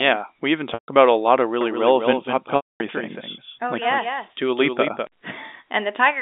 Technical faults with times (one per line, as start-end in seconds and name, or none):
0.74-0.88 packet loss with pitch repetition
1.61-5.07 doubled audio track
2.56-2.80 packet loss with pitch repetition